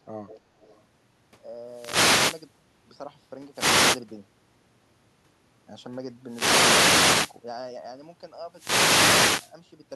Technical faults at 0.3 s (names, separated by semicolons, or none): speech suppressed in double talk; echo leak